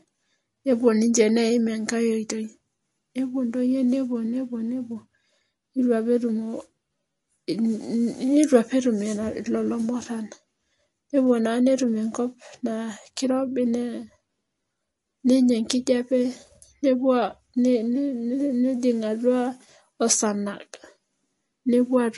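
Throughout the speech, nothing sounds above about 11.3 kHz, and the sibilants swirl with metallic chirps: likely MP3 compression at a low rate, fitting roughly 48 kbps. Unlike a plain low-pass filter, the dropouts flicker between frames, giving that watery texture.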